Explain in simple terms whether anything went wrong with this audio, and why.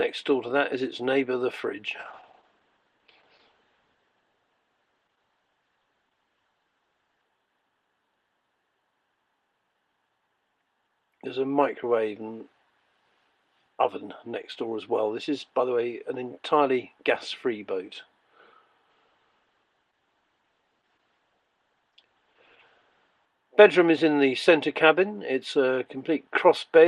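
Yes, a call bitrate drop. From 2.01 s the connection gave the audio far less data, so it was coded more coarsely and lost everything above 8 kHz. This makes it rough, watery or muffled. A second drop ran from 18.9 to 23.33 s. Quality returns only at 26.27 s.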